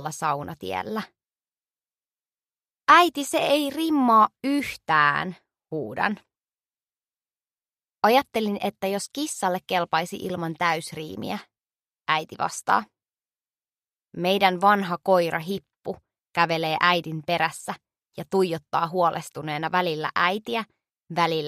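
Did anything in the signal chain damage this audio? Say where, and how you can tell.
No, nothing in the signal chain damaged this audio, so there is nowhere to point to.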